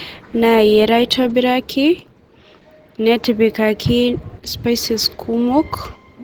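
Opus compression runs throughout this speech recording, plainly audible as a muffled, hoarse texture despite content reaching about 20.2 kHz. The likely cause is an encoder in its hybrid speech mode, squeezing bands at a low rate near 16 kbps.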